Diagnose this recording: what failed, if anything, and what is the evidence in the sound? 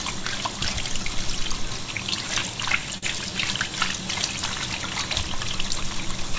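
Short concealed packet loss at 2.98 to 3.04 s, a network fault in the call path: about 40 ms of audio arrived too late for the decoder, and the receiver bridged the gap by extending the preceding sound before blending back, leaving a brief smear. The band stops at 8 kHz, which fits a G.722 call link.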